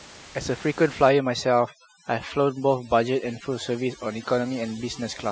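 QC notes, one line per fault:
1.09–5.31 s, overdone noise removal: the room noise, about 18 dB below the speech, drops and breaks up into twinkling specks as bands near the noise estimate are cut too hard. Unlike a noise gate, it cuts band by band rather than muting everything at once.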